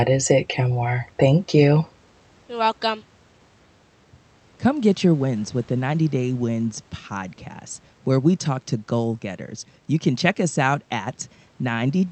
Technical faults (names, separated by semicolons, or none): none